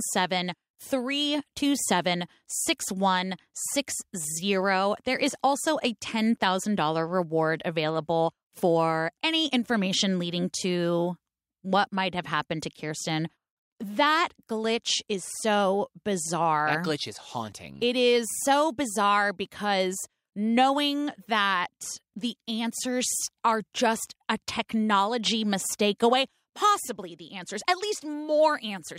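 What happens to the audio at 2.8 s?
Nothing goes wrong at 2.8 s: the speech there plays through cleanly, with no dropout, click, distortion or other fault at that moment.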